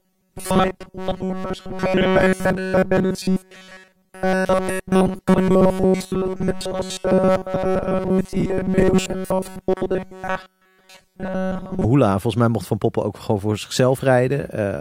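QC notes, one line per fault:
0.01 to 11.85 s, robotic sound from repeated short buffers. The speech becomes a rigid metallic buzz at 188 Hz that roughly tracks the words. The likely cause is audio arriving too seldom, so a 5.3 ms segment repeats continuously, skipping real audio.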